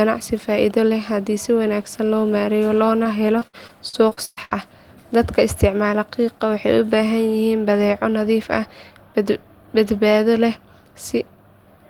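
From 3.03 s to 4.53 s the speech breaks up with repeated packet loss, giving a robotic sound. About nine gaps arrive in quick succession, the longest around 118 ms. Each one is covered by stretching the preceding audio forward, and roughly a quarter of the stretch ends up synthesised this way. The result is choppy, robotic-sounding speech with short pieces missing throughout the span.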